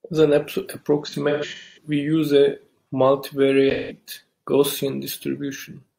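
From 1.04 to 1.87 s the speech turns smeared and noisy in patches, with about 0.43 s of sound missing across roughly 0.68 s and the longest gap near a fifth of a second. A shorter phasey, blurred patch follows at 3.72 to 3.96 s, about 0.17 s. Both are AAC frame loss with concealment: the decoder patched lost frames from the last good spectrum. The first loss fits about ten frames, the second about four.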